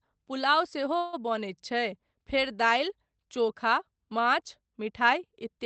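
At 0.97 s packets were likely held up in transit and the jitter buffer ran dry, producing a call audio freeze. For about 155 ms, until 1.15 s, the receiver stretches the last sound into a fading buzz or hiss, then the speech resumes where it stopped, delayed but complete, with the band limited to around 8 kHz, which fits a lowish Opus bitrate.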